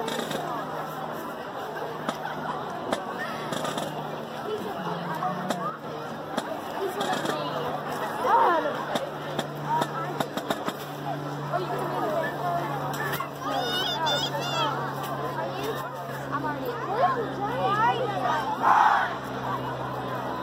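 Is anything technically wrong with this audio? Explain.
Yes. Twice, from 5.70 to 5.84 s and again from 15.81 to 16.09 s, the sound abruptly drops by about 6 dB for roughly 0.14 s and 0.28 s. The likely cause is one channel dropping out, with one side of the stereo signal briefly lost before the mono sum. Material shared by both sides then comes from only one channel, producing the sudden dip, and anything present only in the lost channel vanishes until the level snaps back.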